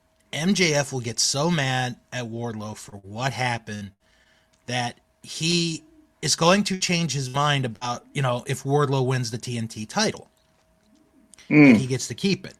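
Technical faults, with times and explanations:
2.89–4.28 s, repeated packet loss (robotic sound): five gaps, longest 68 ms, patched by extending prior sound, choppy sound; spectrogram shows smeared, repeated frames.
5.51 s, short stall from a late packet: jitter buffer ran dry, last sound held about 17 ms then resumed; waveform shows a brief repeated stretch.
6.74–7.84 s, repeated packet loss (robotic sound): after "is going to", three gaps up to 59 ms concealed, choppy sound before "you know if"; spectrogram shows frozen, repeated bands.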